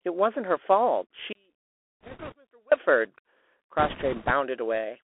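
The whole recording is speech carried through a Bluetooth CVSD headset codec. The band runs only from 300 Hz to 3.4 kHz. The damage is plain. S sounds turn scratchy, loud bright sounds distort as the adaptive step falls behind, and a granular hiss sits underneath. This fits a 64 kbps one-bit stream.

At 1.33 s the speech cuts out abruptly. Until 2.72 s, nearly 1.4 s, only a faint residue remains, around 35 dB below normal level. This is an audio dropout to a faint residue, likely a lost link with the path after it still live.

Bit errors on a Bluetooth voice link appear twice, from 2.01 to 2.33 s, inside the gap, and from 3.79 to 4.31 s. Roughly one bit in twenty-five is flipped. Each error carries little weight, so there are no loud clicks. Instead a rushing crackle spreads over the sound.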